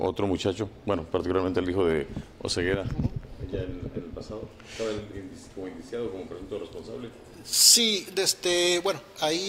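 From 7.53 s to the end, the audio suddenly turns thin, bright and hissy. That's pre-emphasis left on: the treble boost sits about 11 dB higher at 10 kHz than at 1 kHz, which fits a J.17 curve whose matching de-emphasis never got applied.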